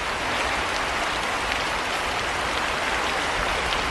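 Sample clock jitter runs through the whole clip: the converter's timing wanders by a couple of microseconds, so fast-changing parts of the waveform are sampled wrongly. The result is a hiss roughly 30 dB below the signal. Unlike a steady noise floor, it swells on loud, bright passages and disappears in silence.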